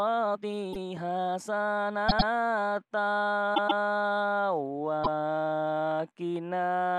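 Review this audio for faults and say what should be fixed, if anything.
From 0 to 1.97 s the sound runs about 1.63 times too fast while its pitch stays put, giving a choppy, rushed time-stretched section. This is likely from software squeezing the passage to fit a length by dropping short pieces. On a spectrogram the harmonics hold their frequencies while events crowd together, with small seams at regular intervals. Prevention: stretch only with a high-quality algorithm, or re-edit the material to length rather than time-compressing it.

Repeated frames cause stutters at four points. At 0.72 to 0.85 s a 0.13 s block plays once extra, and at 2.08 to 2.29 s a 0.10 s block plays twice extra. At 3.54 to 3.80 s a 0.13 s block plays twice extra, and at 5.03 to 5.19 s a 0.16 s block plays once extra. Together they add about 0.76 s. In the waveform each block appears as identical back-to-back copies. 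A spectrogram shows matching patterns. Prevention: check the encoding and transfer path for duplicated frames and verify the output length against the source.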